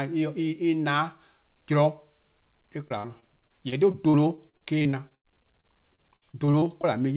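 From 2.88 to 6.85 s the speech turns choppy and robotic: repeated packet loss leaves many gaps, up to 97 ms, each filled by extending the preceding sound.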